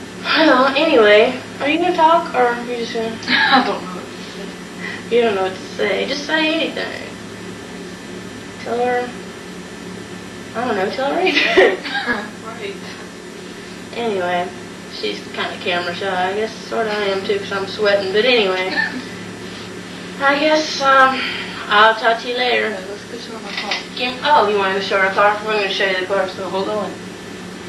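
Segment time stamps overlap at each 6 s boundary, so the player trims audio that was never duplicated. This overlap between stream segments drops 7 to 19 milliseconds and makes the waveform jump, heard as brief clicks or tiny skips at 6.13, 12.13, 18.11 and 24.10 s.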